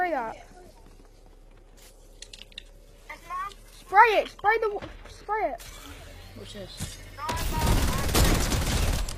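At 0.85 s the sound drops abruptly to a lower-bitrate version of an adaptive stream, with no gap at the switch, and holds there until 6.85 s. Over those six seconds nothing comes through above about 14.9 kHz, the top end takes on a synthetic, papery sheen, and coding artefacts thicken. That combination points to a fall from roughly 96 kbit/s AAC to around 20 kbit/s HE-AAC, with the treble rebuilt rather than actually carried.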